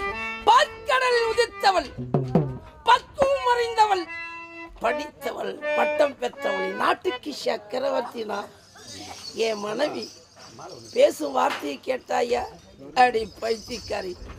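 No technical faults can be heard anywhere in the audio; the signal holds steady and intact throughout.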